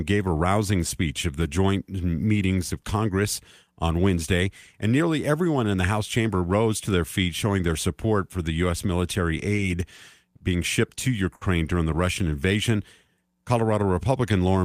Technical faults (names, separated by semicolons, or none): short stall from a late packet; jitter buffer slow-down